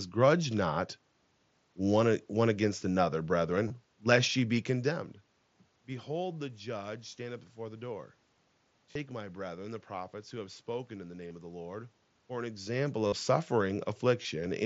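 Speech carrying concealed Bluetooth headset packet loss at 3.68–3.70, 5.92, 8.91–8.96, 11.28–11.31, 13.07–13.12 and 14.22–14.25 s. The headset link dropped packets, and the phone refilled each gap by repeating a recent stretch of waveform. The single loss at 5.92 s is nearly hidden. The longer runs, up to about 52 ms at 13.07 s, come through as a brief, buzzy, full-level tone with a small warble as real speech resumes. On a waveform these show as short, unnaturally periodic copies at constant amplitude. A spectrogram shows narrow bands of evenly spaced harmonics that stay flat where the speech would normally move.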